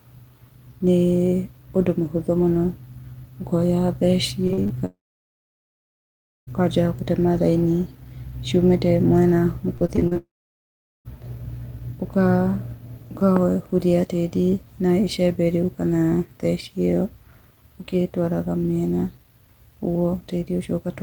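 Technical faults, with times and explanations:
4.47–4.72 s, repeated packet loss (robotic sound): four short holes, the longest 41 ms, together about 100 ms lost, each patched by repeating the last sound, so 42% of this stretch is filled-in audio with a choppy texture. On a spectrogram, smeared, frozen harmonic bands alternate with normal detail. The waveform shows repeated, too-regular cycles at each hole.
4.86–6.49 s, long network dropout: a brief continuation buzz lasts about 0.1 s, then roughly 1.5 s of silence follows before the sound resumes with about 1.6 s missing. This is likely caused by a stall in the stream. The spectrogram shows a fading smear, then a blank band. The waveform goes flat.
9.77–10.17 s, repeated packet loss (robotic sound): six gaps, the longest 38 ms, about 160 ms lost, with 35% of the span concealed. The result is a stuttering sound, with the same stretched, blurred harmonic patches across the spectrogram.
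10.17–11.07 s, long network dropout: follows straight on from the choppy stretch, with a short fading buzz, then about 0.78 s of silence and about 0.88 s missing overall. The waveform is flat and the spectrogram is an empty gap until the sound returns.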